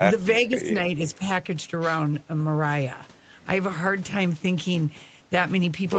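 At 0.45 to 0.49 s, a loudspeaker echo canceller on the far end likely let part of its microphone pickup through, an echo leak. A faint copy of the speech, roughly 30 dB below it, returns about 0.48 s late as a brief scrap.

From 0.49 to 0.69 s, the canceller apparently could not tell the local talker from loudspeaker echo while both sides were active. This is speech suppressed in double talk: the speech dips by up to around 10 dB in pieces totalling about 150 ms, within the clip's 8 kHz call bandwidth.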